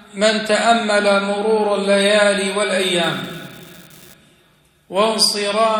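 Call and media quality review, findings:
Unreliable data bit, 3.03 s to 4.14 s. Steady crackle and fizz, constant through the span, pauses included. Probable component: a marginal data line in the converter or digital link. Mechanism: one bit flips in a random share of samples. Each flip adds an identical spike, about -23 dBFS. Stops cleanly at 4.14 s.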